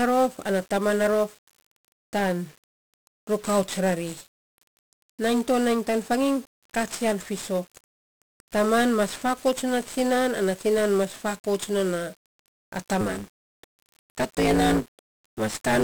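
From the start, the speech carries the heavy damage of 1-bit DFPWM compression. Each sample keeps only a single up-or-down step on an adaptive level, so a coarse broadband fuzz and crackle rides on everything and the top end drowns in hiss, which fits a rate of around 48 kbps. Unlike a band-limited codec, the treble isn't cut off cleanly. It stays present but buried in noise.

From 13.0 s to the end, a block size mismatch (truncated) appears. The writing stage produces longer blocks than the reader takes, which fits 512-sample writes, and each block's tail is discarded. The result is a steady buzz near 109 Hz, the rate at which those cuts repeat, while the speech hurries along about 1.16 times faster. Resampling would raise the pitch along with the speed, but here the pitch stays roughly where it was.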